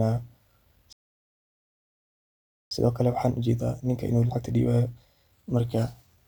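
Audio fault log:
0.93–2.71 s, playback stall: the speech cuts off mid-flow and the output falls completely silent for about 1.78 s before sound returns. The silence points to the player having nothing to render during that interval. The likely cause is an emptied input buffer or a blocked playback thread, with output resuming once data was available again.
2.71–5.71 s, time-compressed catch-up: immediately after the silence, the speech runs hurried for about 3 s at roughly 1.25 times normal rate while keeping its original pitch. The player is shedding the backlog built up during the stall by removing short segments and cross-fading the joins. Normal timing returns at 5.71 s.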